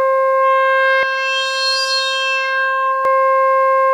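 From 1.03 to 3.05 s, channel delay (comb filtering), one side about 20 ms late, leaves fixed notches from 30 Hz and a rough, slightly doubled sound, not flanging's sweep.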